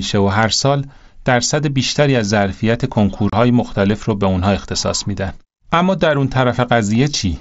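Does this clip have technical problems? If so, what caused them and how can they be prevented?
Yes. At about 3.30 to 3.33 s the speech drops out for roughly 30 ms, a hard-edged hole. This is unconcealed Bluetooth headset packet loss: a few mSBC voice packets never reached the phone, and silence or an idle pattern filled the gap. Keeping the headset close to the phone, away from Wi-Fi interference, and using a receiver with packet loss concealment would prevent it.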